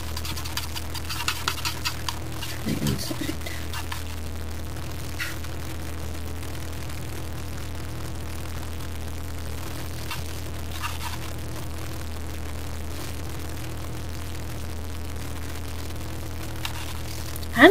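Grainy distortion runs through the whole sound and changes with it, roughly 10 dB below the signal. That points to low bit depth without dither, likely about 6 bits by truncation. Unlike steady hiss, this error follows the signal.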